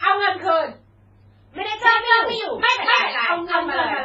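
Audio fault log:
throughout: transcoding between lossy codecs, stacked artefacts from two low-bitrate codecs, likely an MP3 pass re-encoded to HE-AAC; nothing remains above 7.7 kHz.
1.84 s to end: doubled audio track, a second full-band copy at roughly equal level trails by about a third of a second, dry and abruptly starting, likely an out-of-step edit.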